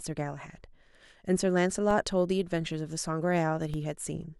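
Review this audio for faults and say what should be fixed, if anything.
Two DC steps turn up in this speech, at 1.91 s and 3.74 s. Each time the waveform's zero line jumps by about -26 dBFS, giving a low thump, then bleeds away through a 20 Hz high-pass. Fix it by keeping offset-carrying inputs from switching in mid-take.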